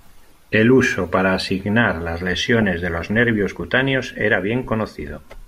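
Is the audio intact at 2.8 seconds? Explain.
No. DAB burbling covers 2.62 to 3.30 s, between "uso para asignar las" and "cutáneos era". Weak reception lets bit errors past error correction into the MP2 data. Corrupted scale factors make single sub-bands jump in level. The speech picks up short blips of noise.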